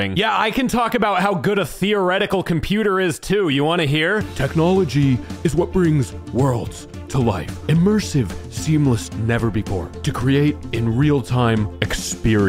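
No technical faults can be heard anywhere in the audio.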